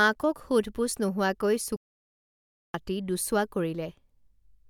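At 1.76 s the speech cuts out abruptly and stays silent until 2.74 s, a gap of about 0.98 s, then resumes. This is a playback stall: the player likely starved of buffered data or had its output thread blocked.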